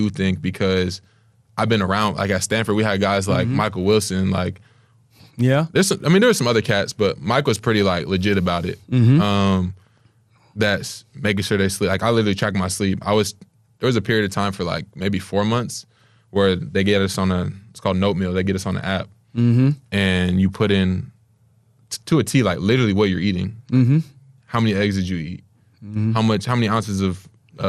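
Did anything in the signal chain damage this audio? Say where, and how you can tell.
Yes. The codec stage shows damage across the whole clip. The speech is dull and granular throughout, with a gurgling roughness and upper frequencies that come and go. That points to MP2 compression, likely at a low rate, around 80 kbps. MPEG Layer II divides the signal into 32 sub-bands and shares out a fixed bit budget. With too few bits, upper bands drop out and the remaining ones are coarsely quantised, which causes the plainly audible distortion here.

There is a transmission fault from 1.63 to 1.68 s, just before "been around like at". A brief burst of sub-band noise lasts about 44 ms. That is DAB burbling: weak reception let bit errors slip past error correction into the MP2 stream. The short span fits a few corrupted frames at a low error rate, roughly a tenth of a percent. Wrong samples put short noise blips into single sub-bands, and wrong scale factors make sub-bands jump in level.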